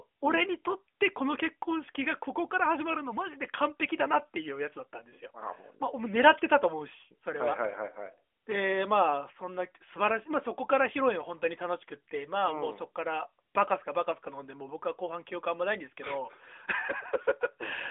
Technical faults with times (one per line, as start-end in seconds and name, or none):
none